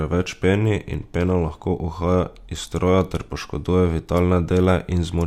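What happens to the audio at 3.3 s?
Nothing goes wrong at 3.3 s; the speech plays through that moment intact.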